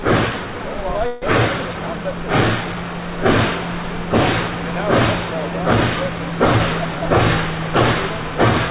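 Everyday sounds carried over a call path whose G.711 mu-law coding at 64 kbps leaves nothing above 4 kHz. From 1.07 to 1.24 s a call audio freeze stretches the last sound into a fading buzz or hiss for about 153 ms, likely from the jitter buffer running empty. Playback then resumes with nothing lost, running 153 ms later.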